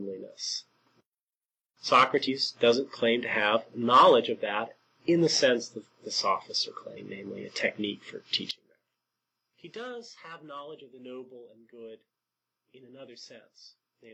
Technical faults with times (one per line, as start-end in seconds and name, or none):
2.24-2.28 compressed frames skipped
6.93-7.00 compressed frames skipped
8.51-14.13 one channel inverted